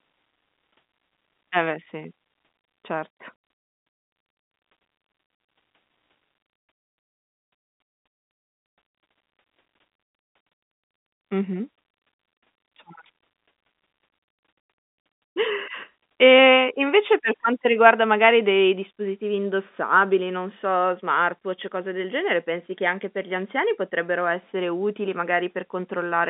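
Speech over G.711 telephone coding, its band confined to roughly 200 Hz to 3.6 kHz as the line dictates, with no technical faults to report.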